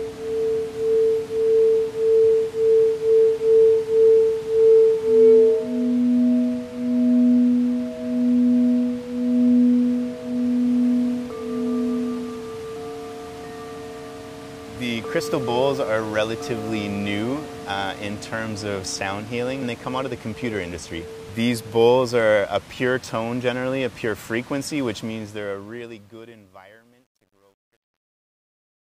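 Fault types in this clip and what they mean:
Truncation distortion on a fade: the fade-out from 24.95 s to the end loses resolution because a digital level stage drops low-order bits without dither, consistent with roughly 10 bits kept. The waveform coarsens into stepped shapes, so the tail turns gritty, worst from 26.16 s onward as the level nears the smallest step. Unlike steady hiss or a gate, this grit is tied to the signal and grows as the fade deepens.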